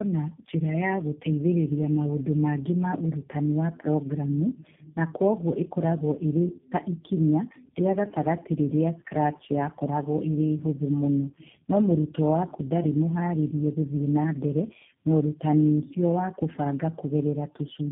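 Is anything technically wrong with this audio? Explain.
Yes. Tandem speech coding is present throughout the clip. The speech has passed through about four speech codecs in a row, decoded and re-encoded at each link, so every coder starts from the previous coder's damage and adds its own. The result is rough, muffled and warbly, more so than any single codec would make it. Nothing comes through above 3.7 kHz, which fits a narrowband telephone chain ending in a G.729-type coder.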